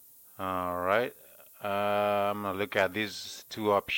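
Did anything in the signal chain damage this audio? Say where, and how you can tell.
Yes: low bit depth with noise shaping at sample-format conversion, throughout. A steady thin hiss rising toward the top, which fits 8-bit requantization, rather than flat broadband hiss.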